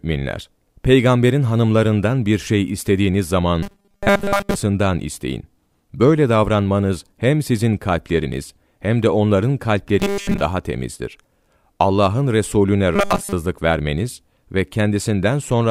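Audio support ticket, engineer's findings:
Robotic sound from repeated short buffers at 3.63–4.55 s (after "hanımlarından bir şey istediğiniz"), 9.99–10.41 s (before "daha temizdir") and 12.96–13.33 s (before "vermeniz ve"). Speech becomes a rigid, metallic 200 Hz buzz. The likely cause is a buffer underrun, with a 5 ms block replayed and most of the real audio skipped.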